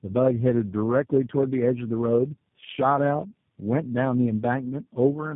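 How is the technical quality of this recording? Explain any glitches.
Quality is poor throughout because of tandem speech coding. The speech was decoded and re-coded several times, each codec working on the last one's damaged output. It sounds rough, muffled and warbly, with nothing above 3.5 kHz. This points to four speech codecs in a row, ending with G.729A.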